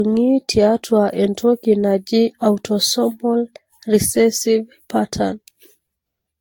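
The speech is affected by generation loss from start to finish. It sounds swirly and hollow, with a smeared texture that a single encode at a moderate bitrate would not produce. Consonant attacks are blurred. Content stops at about 19.3 kHz. The likely cause is repeated lossy coding, around seven passes, which fits a Vorbis-type codec near 70 kbit/s. Each re-encode quantises on a shifted frame grid. Noise and spectral holes pile up with every pass.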